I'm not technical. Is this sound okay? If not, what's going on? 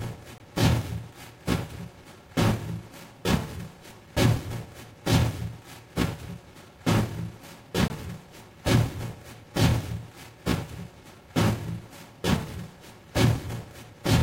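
No. There is a block of digital silence at 0.38 to 0.40 s, and again at 7.88 to 7.90 s. Each time, about 20 ms of the sound drops out completely and then returns. Nothing fades it in or out; the sound jumps to nothing and straight back. The playing or recording program most likely failed to supply the next chunk of sound in time and left zeros in its place.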